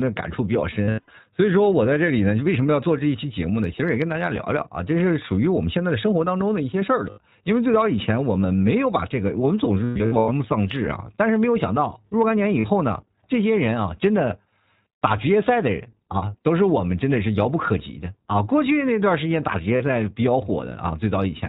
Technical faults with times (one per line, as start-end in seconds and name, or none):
0.00-21.49 iLBC codec
0.84-1.10 lost iLBC frames
7.09-7.18 lost iLBC frames
9.85-10.30 lost iLBC frames
12.60-12.66 lost iLBC frames
19.76-19.82 lost iLBC frames